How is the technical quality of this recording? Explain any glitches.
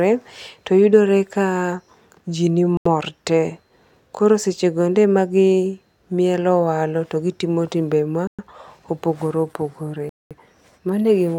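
The speech is broken three times by short, complete silences, each consistent with a Bluetooth stall. The gaps run from 2.77 to 2.86 s (83 ms), from 8.27 to 8.39 s (113 ms) just after "to gitimo timbe", and from 10.09 to 10.31 s (214 ms). The likely cause is radio interference delaying packets until the headphones' buffer emptied, so playback halted until the resent data arrived. Each gap drops to true silence rather than noise or a smeared, warbling patch, and the speech then carries on with no fade. That sets it apart from codec packet-loss concealment, which fills the hole with synthesized sound.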